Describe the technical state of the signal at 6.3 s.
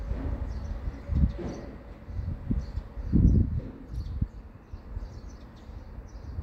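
At 6.3 s the audio is intact, with no audible fault at that moment.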